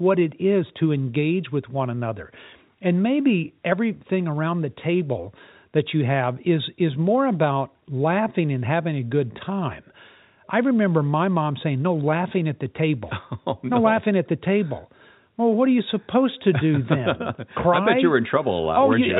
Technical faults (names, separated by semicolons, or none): none